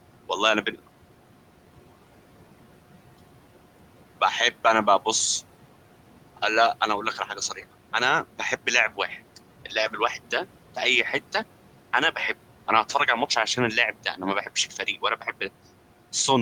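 Speech with room noise sitting about 20 dB down, and noise suppressor artifacts run through the whole thing: the suppressor pulls that noise about 12 dB lower between phrases, then lets it swell back under the talking.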